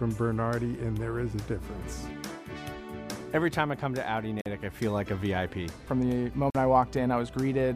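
At 4.41 s and again at 6.50 s the audio drops into a block of digital silence lasting about 46 ms each time, which fits a 2048-sample buffer that was not filled in time. Each gap begins and ends abruptly, leaving a brief hole. Unlike a faded dropout or a concealed packet loss, nothing is smoothed or filled in here: the signal simply goes silent.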